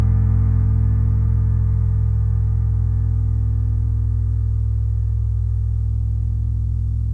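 No technical faults can be heard anywhere in the recording; the signal stays steady and intact throughout.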